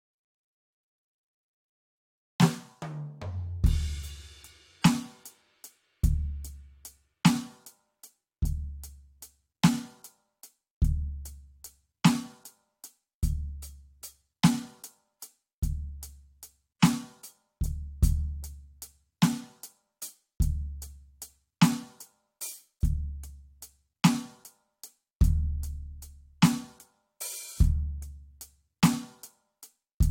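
No technical faults are audible.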